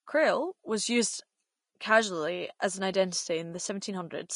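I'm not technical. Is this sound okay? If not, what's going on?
No, it isn't quite right. Throughout, the speech sounds hissy and grainy, consonants are smeared, and nothing is left above about 10.5 kHz. That's likely Vorbis compression squeezed hard, where fine high detail gets replaced by rough noise.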